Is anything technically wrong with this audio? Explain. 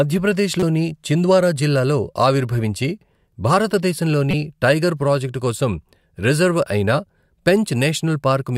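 Yes. There is damaged data in a compressed stream, at 0.60–0.63 s and 4.31–4.34 s. Corrupted bytes made the decoder misread those frames and lose sync until it found the next frame header. Each event is a brief chirp or blip in the speech.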